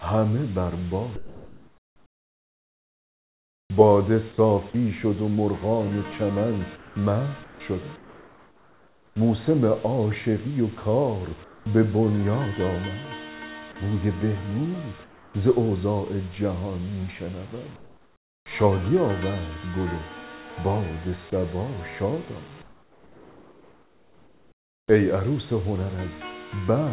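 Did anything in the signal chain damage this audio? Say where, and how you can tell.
Yes: comfort noise in place of the background, at the call-processing stage. At 1.16–3.7, 6.76–6.96, 7.44–7.6, 7.96–9.16, 11.44–11.66, 15.04–15.34, 17.76–18.46 and 22.62–24.88 s, the real room tone gives way to a smoother hiss about 4 to 10 dB quieter. This is likely discontinuous transmission, with the receiver filling each pause with synthetic noise. On a spectrogram those stretches show flat, evenly textured noise, and in the waveform the noise floor steps down at each one.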